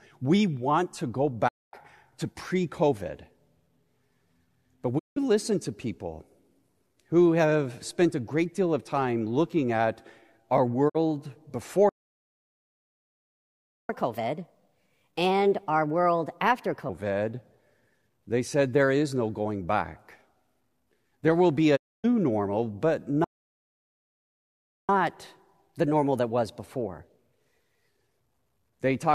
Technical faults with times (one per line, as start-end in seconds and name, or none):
1.47-1.75 digital broadcast dropout
4.97-5.18 digital broadcast dropout
10.88-10.97 digital broadcast dropout
11.89-13.89 playback stall
13.89-16.89 catch-up at higher speed
21.75-22.06 digital broadcast dropout
23.24-24.89 playback stall
24.89-27.89 catch-up at higher speed